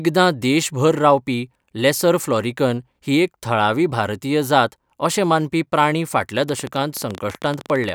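A speech recording, with a train of clicks running from 6.49 to 7.90 s, right at the end. The ticks come at about 13.6 per second but unevenly spaced, some twenty in all. Each is a similar sharp pop that stands out, roughly 5 dB above the speech, and it carries on over the pauses as well as the talking. Repeated, same-shaped pulses like this likely come from electrical interference from nearby equipment or a faulty connection or power supply.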